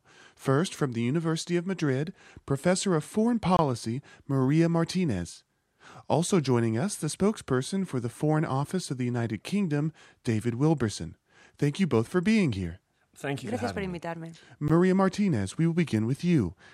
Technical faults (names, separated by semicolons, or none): Bluetooth stall